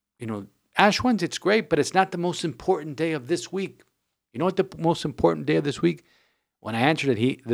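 Speech recording with no technical faults to be heard.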